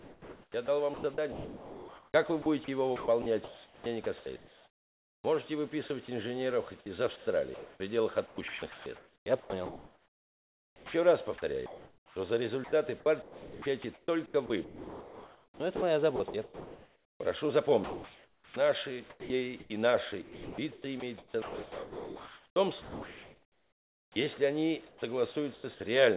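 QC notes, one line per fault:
0.0–25.64 s, sound chopped by the voice detector: the audio keeps dropping in and out, with quiet edges and softer passages cut away and replaced by a synthetic hiss. About 13.3 s of the sound is replaced this way. The likely cause is a sender-side voice detector repeatedly switching transmission off and filling the gaps with comfort noise, which, through the G.711 call path, stops at 4 kHz.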